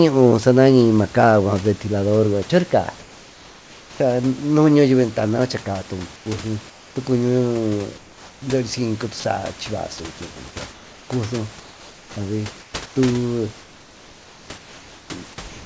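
Comfort noise in place of the background comes in at 3.00–4.00 s, 6.16–6.96 s and 7.98–8.42 s. In each pause the real room background gives way to a smooth, featureless hiss, about 4 dB quieter in the first and third. This is likely discontinuous transmission, with the receiver synthesising noise while the sender was silent. At 9.20–9.24 s, sound likely dropped by the voice detector removes 40 ms of speech, filled with the same steady noise. Comfort noise returns at 10.72–12.96 s and from 13.62 s to the end.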